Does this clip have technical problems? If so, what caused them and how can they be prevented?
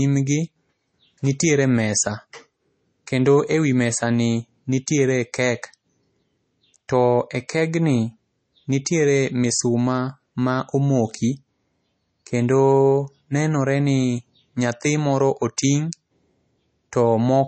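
Yes: throughout, the speech sounds watery and swirly with nothing above 8.3 kHz, likely MP3 compression at a low bitrate near 32 kbps; plain low-pass filtering wouldn't swirl. Encode at a higher bitrate.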